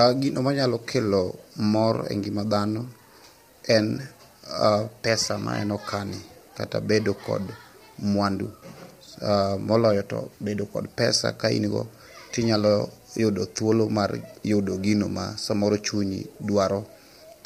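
From start to finish, the speech sounds rough and grainy. A hiss-like noise fills the gaps between the pitch harmonics, and the damage is plainly audible. The likely cause is low-delay AAC compression, the AAC-ELD codec used for video calls. It works in very short frames, which resolve voice harmonics poorly and use up bits quickly. The roughness fits a bitrate around 32 kbps, too few bits to code the harmonics cleanly.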